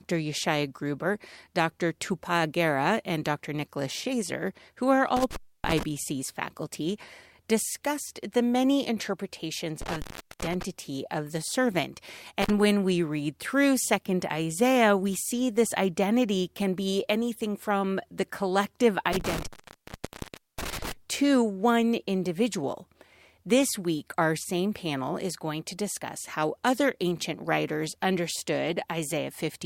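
Speech drops out with crackle at each edge and faint hiss in the gap after "who are" (5.16 to 5.83 s, about 0.28 s open), after "discussed the many interpretations" (9.82 to 10.63 s, 0.41 s), at 12.42 to 12.50 s (35 ms), and after "anything from the collective" (19.13 to 20.92 s, 1.12 s). This intermittent contact comes from a loose cable or plug briefly opening the signal path.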